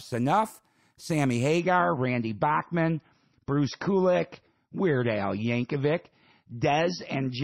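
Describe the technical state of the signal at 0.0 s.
At 0.0 s the signal is intact, with no audible dropout, distortion or other fault at that moment.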